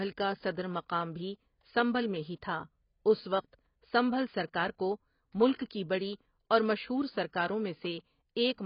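Speech runs heavily smeared for the whole clip, with nothing above 5.3 kHz and a warbling, fizzy texture on sustained sounds and sibilants, likely AAC compression at a rate near 16 kbps. Unlike a plain low-pass filter, the damage includes swirling artefacts, not just dullness.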